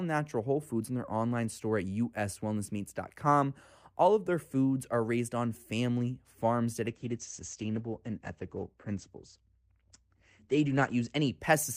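At 6.89 s a call bitrate drop sets in and lasts until 11.45 s, with the worst stretch holding for about 4.03 s. The bandwidth estimate fell, so the encoder had to spend far fewer bits, which fits a cut from roughly 64 to 13 kbps. The coding turns coarse, giving the speech a rough, watery texture, and the audio bandwidth narrows from 20 kHz to 8 kHz, leaving it muffled.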